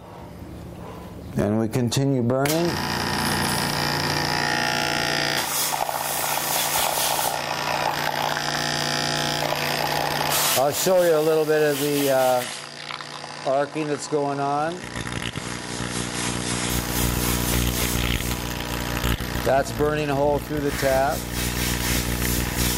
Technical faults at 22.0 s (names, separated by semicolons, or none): none